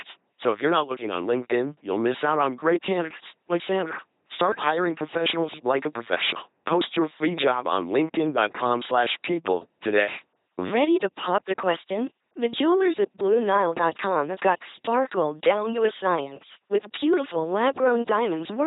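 Throughout, the speech has passed through an LPC-10 vocoder, heavily damaged, at a rate that fits 2.4 kbit/s. Each instant drives a ten-pole filter with either a buzz or a hiss, so the speech sounds robotic and mechanical, with misplaced buzzes and hiss, and nothing above 3.9 kHz.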